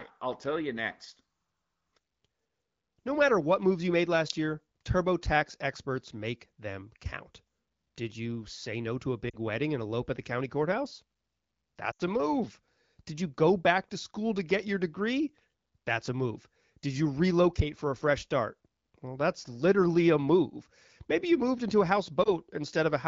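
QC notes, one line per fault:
9.29 to 22.30 s, lost AMR speech frames: corrupted frames failed their checks, so the decoder extrapolated the last good frame with falling gain. There is a brief warbling dip at 22.23 to 22.30 s, after "you moved into a". At 9.29 to 9.36 s, between "say no to a" and "wedding and elope at", two lost frames (40 ms) drop the sound to near silence. At 11.91 to 12.02 s, just before "a move", a longer gap of about 80 ms (four 20 ms frames) drops the sound to near silence. The surrounding AMR wideband (HD Voice) codec audio sounds clear.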